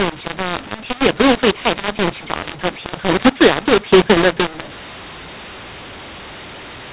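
Speech over a G.711 telephone path, with the mu-law and A-law mixed up for the whole clip: samples coded as A-law are decoded as mu-law, so levels come out scrambled. The waveform shows wrong amplitudes and pauses filled with noise instead of near-silence. The sound is harsh and distorted, and on a spectrogram nothing appears above 4 kHz, as expected for 8 kHz telephone audio.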